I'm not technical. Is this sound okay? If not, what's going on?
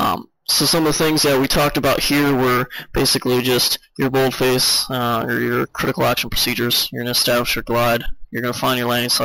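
No. Throughout the clip there's a thin, bright, metallic fizz riding on top of the sound, rising and falling with it. This is imaging from sample-and-hold upsampling: the audio was stretched to a higher quality setting by simply repeating samples, creating false high-pitched copies between 8 and 16 kHz.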